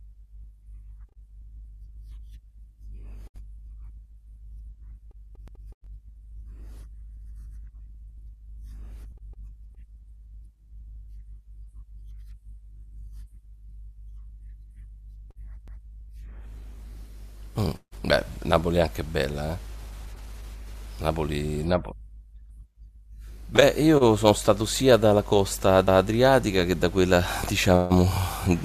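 Overlapping chunks in this speech, processed in 10-second blocks, replay 200 ms at each join, causing stutters at 5.48, 15.68 and 25.88 s.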